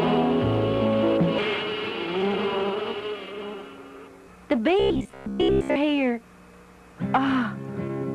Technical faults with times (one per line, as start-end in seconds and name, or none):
4.80-5.77 robotic sound from repeated short buffers